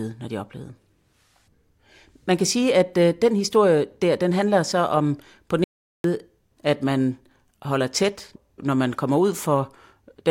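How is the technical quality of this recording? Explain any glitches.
The speech is interrupted once by a playback stall. At 5.64 s the audio cuts to silence in mid-flow and stays silent until 6.04 s, a gap of about 0.40 s, before the speech resumes. The abrupt stop and restart, with no fade, point to the player likely running out of buffered data or having its playback thread blocked, so the output went silent until it recovered.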